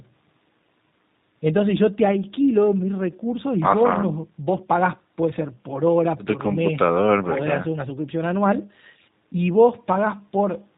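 Throughout the speech, the G.729 codec sounds plainly rough and synthetic, fitting an 8 kbit/s model-based coder. The spectrogram shows nothing above 4 kHz.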